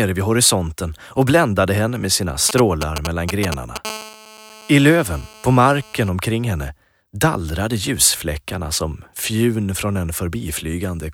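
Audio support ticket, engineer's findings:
GSM signalling bursts, 2.49 to 3.78 s: galloping dit-dit-dit of short 217 Hz buzzes, nearly as loud as the audio itself. A 2G phone close by is handshaking with the network, and some input stage rectifies its RF pulses.

GSM phone buzz, 3.85 to 6.09 s: steady, raspy 217 Hz buzz with lots of harmonics, about 18 dB under the signal. Same phone now in a call, bursting continuously; the audio circuitry demodulates the carrier into the mix.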